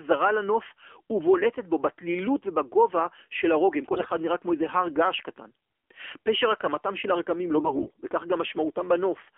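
Speech heard through an AMR narrowband mobile codec from start to finish. The codec damage is plainly audible: a buzzy, synthetic edge from a vocal-tract model driven by sparse pulses, which fits the low 7.4 kbps mode. The band runs from about 300 Hz to 3.4 kHz, so a spectrogram shows a hard ceiling with nothing above it and a thinned floor below 300 Hz. Within that band the harmonics look smeared rather than sharply striated.

On top of this, AMR bit errors strike twice, at 3.92–4.14 s and again at 7.56–7.90 s. The first burst fits about ten 20 ms frames, the second about seventeen. Around a tenth or more of the weakly protected bits arrive flipped, while the core parameters survive. Pitch and loudness hold roughly steady, but the sound turns hoarse, scratchy and gargly because the excitation pulses land in the wrong places and the finer gain and spectral values drift. On a waveform the envelope stays near its normal level. 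The spectrogram shows blotchy, noisy texture with broken harmonic lines across those spans.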